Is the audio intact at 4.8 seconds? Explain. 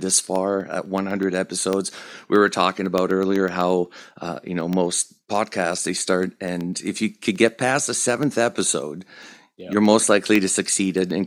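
No. At 4.80 s the clip sits inside a run of periodic USB or driver dropouts lasting from 0.11 s to 11.11 s. Something stalls the audio path every 0.125 s. Each stall loses a sliver of sound, roughly a tenth of a millisecond, filled with silence. The result is a steady ticking under the speech.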